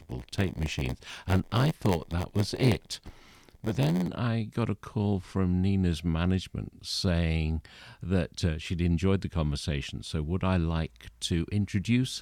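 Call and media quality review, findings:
Block size mismatch (padded), 0.00–4.17 s: zero-filled gaps give an 86 Hz buzz, fitting 512-sample reads. Speech runs at 0.938x speed with timbre unchanged, unlike a sample-rate mismatch.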